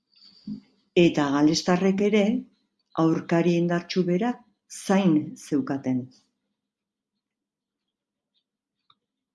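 No technical faults are audible.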